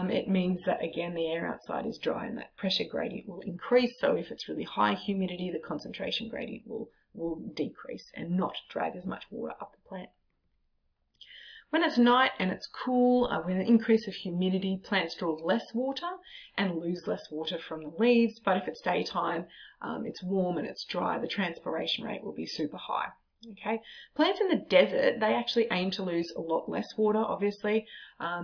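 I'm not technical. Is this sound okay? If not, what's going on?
Yes, this sound is okay, and nothing in it points to a technical problem. There's no fault here that needs fixing.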